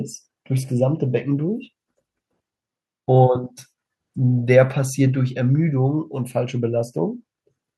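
No technical faults are audible.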